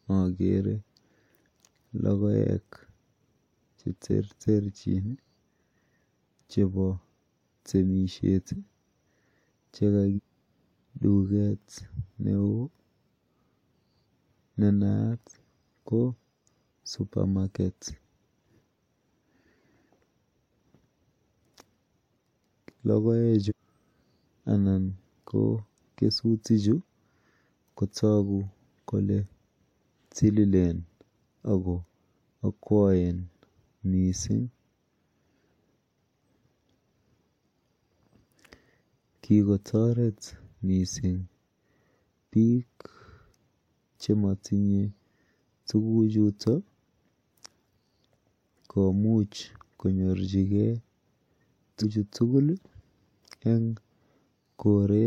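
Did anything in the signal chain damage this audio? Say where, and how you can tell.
Yes, at the codec or storage stage: compressed frames skipped, four times. At 10.15–10.20 s, 23.48–23.52 s, 32.16–32.19 s and 51.81–51.85 s the speech jumps forward, losing roughly 0.7 s, 0.2 s, 0.3 s and 0.3 s. The jump sizes fit whole frames of about 46 ms that went missing from the file or were rejected by the decoder.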